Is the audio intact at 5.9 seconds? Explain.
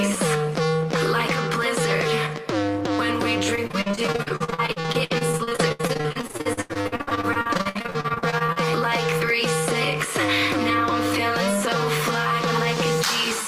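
No. At 5.9 seconds the sound is choppy, with pieces missing, inside a stretch of repeated packet loss from 3.55 to 8.58 s. Around 40% of that span is patched by extending the preceding sound across gaps up to 84 ms long.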